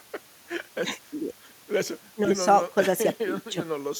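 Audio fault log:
No faults turned up anywhere in this bit of speech, so there's nothing to log.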